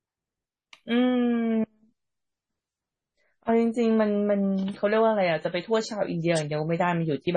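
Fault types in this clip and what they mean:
Adaptive stream at a lower bitrate: from 1.13 s the speech abruptly loses treble above about 10.4 kHz and gains codec artefacts, consistent with a drop to roughly 24 kbit/s MP3.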